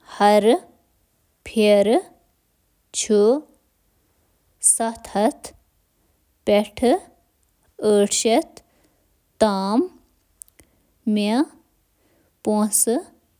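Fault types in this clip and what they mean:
No fault types can be heard in this clip.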